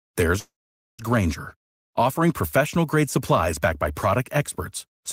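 A speech clip with a call audio freeze from 0.39 s to 1.01 s. The sound stops moving forward, a brief fading continuation of the last sound gives way to roughly half a second of silence, and then the speech resumes exactly where it left off. About 0.59 s of filler has been inserted, with no speech lost, so everything after the gap runs that much later. The likely cause is delayed packets draining the jitter buffer.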